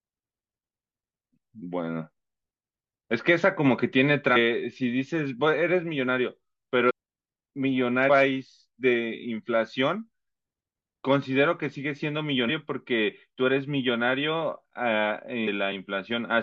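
Damaged data in a compressed stream corrupts frames, so the decoder misreads them and loses sync while hunting for the next frame header. The speech is broken by brief chirps or blips at 4.35–4.37 s, 6.89–6.91 s, 8.08 s, 12.48–12.50 s and 15.47 s.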